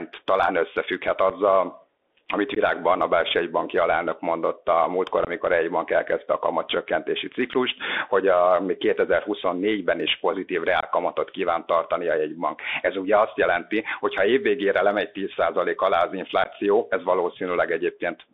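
Throughout, the speech sounds muffled and scratchy, with granular hiss and hard-edged sibilants. It is a Bluetooth CVSD headset codec at 64 kbps, passing only about 250 Hz to 3.6 kHz. Abrupt dropouts then cut in at 1.30 s after "talán összefügghet", 2.55–2.58 s, 5.25–5.29 s, 7.53–7.55 s, 10.80–10.86 s between "is pozitív" and "kíván tartani a jegybank", and 16.44–16.48 s after "alá az". Each is unconcealed Bluetooth headset packet loss, 7.5 to 22.5 ms lost, roughly one to three lost packets.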